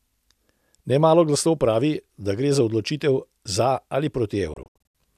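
A speech recording whose sound breaks up into several short silent holes between 4.54 and 4.97 s, each cut off with a very quick fade of about 3 ms. The holes total about 240 ms, the longest 72 ms. This is a digital broadcast dropout: the receiver muted whenever frames arrived corrupted or missing, which fits roughly ten lost frames.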